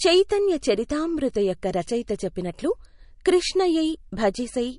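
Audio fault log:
throughout, low-bitrate audio saved at a high bitrate: spectrogram empty above 10.6 kHz, likely a ceiling left by an earlier low-bitrate MP3 encode that re-saving cannot restore.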